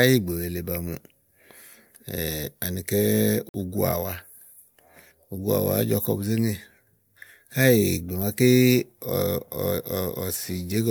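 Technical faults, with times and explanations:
3.49–3.54 s, repeated frames: The speech stutters briefly here. A 26.1 ms slice of audio plays three times in a row instead of once. The repeat length fits a single compressed frame that was written or sent more than once. The decoder simply played the same frame again each time it arrived. The two extra plays add 52.2 ms to the clip. Everything after this point is delayed by that amount.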